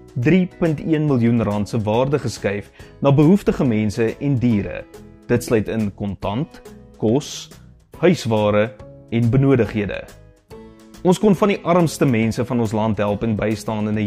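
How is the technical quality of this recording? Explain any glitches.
The technical quality of this recording is sound, with no glitches to explain.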